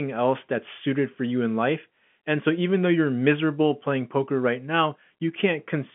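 No technical faults can be heard in this speech.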